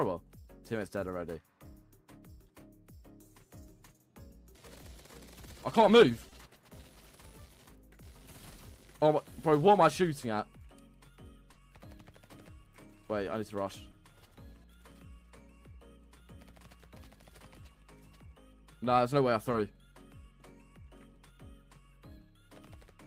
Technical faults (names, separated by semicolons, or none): short concealed packet loss